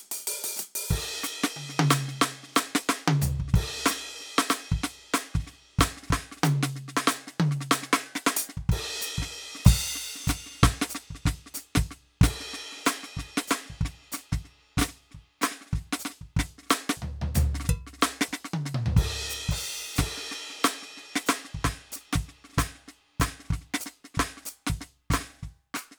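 Listening to the music, nothing stood out as a technical problem at any point.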